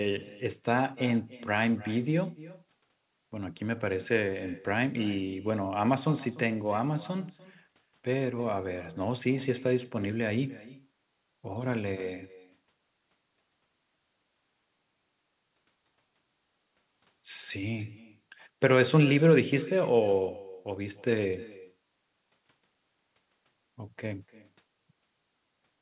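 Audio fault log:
throughout echo with no canceller: a faint, thin copy, about 19 dB down, trails the speech by roughly a third of a second, because the far-end microphone picks up its loudspeaker.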